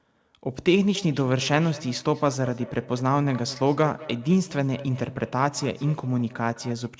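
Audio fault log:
0.95–6.92 s, feedback echo between two devices: the speech returns at a steady interval of roughly a fifth of a second, reaching about 18 dB below the direct level, with a thin, ringing colour. A second device in the same room is replaying this call, and its output is picked up again by the original microphone. That microphone's echo canceller only models its own loudspeaker, so this path passes through uncancelled. The echo, like the direct sound, stops at 8 kHz, which fits a wideband G.722 call path.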